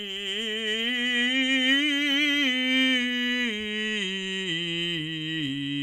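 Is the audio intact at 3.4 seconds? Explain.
Yes, at 3.4 seconds the music plays through intact, with no dropout, click, distortion or other fault at that moment.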